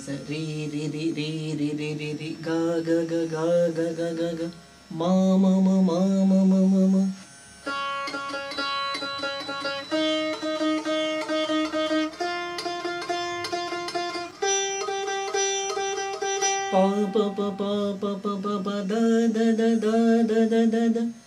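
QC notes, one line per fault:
8.41 to 10.73 s, feedback whistle. A thin, steady tone at 4 kHz sits behind the sound, around 15 dB under it, swelling and fading slowly in level. The likely cause is a loudspeaker-to-microphone loop held just at the edge of feedback, so one frequency rings without building up.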